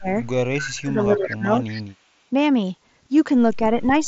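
From the very start to 0.08 s the speech dips sharply, by around 25 dB. From 0.74 to 1.5 s it sinks again by about the same depth, in pieces that add up to roughly 0.7 s. Near the end, from 3.75 s to 4.07 s, there is a milder dip of around 5 dB. This is speech suppressed in double talk: with both sides talking at once, the echo canceller likely could not tell the near talker from loudspeaker echo and pulled everything down.

Interleaved with this, delayed copies of the voice surface at 0.61 to 0.7 s, 1.15 to 1.32 s and 1.62 to 1.82 s. Each trails the original by 227 ms and sits about 15, 10 and 20 dB below the speech respectively. This is echo leak: the far side likely plays the call over a loudspeaker, and its echo canceller let part of what its microphone heard travel back. The Bluetooth mSBC headset path caps the band just under 7.7 kHz with only light graininess.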